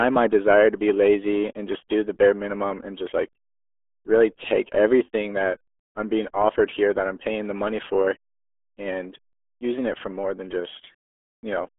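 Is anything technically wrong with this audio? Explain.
Yes. Throughout, the RealAudio 14.4 codec leaves speech muffled and gargly. It sounds like an 8 kbit/s dial-up stream, with nothing above about 3.4 kHz.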